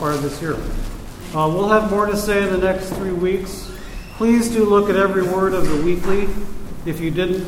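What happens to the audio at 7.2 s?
Nothing goes wrong at 7.2 s; the audio plays through that moment intact.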